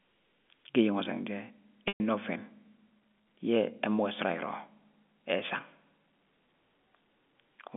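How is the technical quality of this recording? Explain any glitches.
One glitch stands out in this telephone-band speech, which is limited to roughly 200 Hz to 3.5 kHz by G.711 coding.

Packet loss with pitch repetition, 1.88 to 2.00 s: about 120 ms of audio went missing, which fits six 20 ms packets. The receiver filled the gap by looping the last pitch period and fading it over about 50 ms. You hear a brief buzzy hold, then silence, then speech cross-fading back in.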